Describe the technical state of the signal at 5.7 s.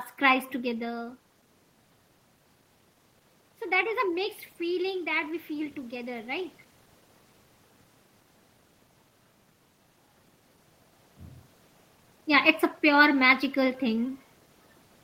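At 5.7 s the signal is midway through an automatic gain rising, running from 4.85 to 6.6 s just after "that is a mixed". The gain control judged the input too quiet and lifted its level by about 3 dB, so voice and room noise swell together. On a waveform the envelope widens gradually, and a spectrogram brightens evenly across all frequencies, background included.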